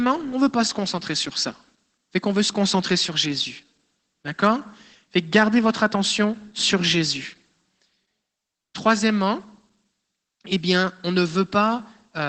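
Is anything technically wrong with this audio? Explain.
Yes. Opus voice compression runs throughout. Content stops near 8 kHz, sounding muffled, hoarse and faintly robotic. This points to roughly 12 kbps SILK coding the excitation coarsely.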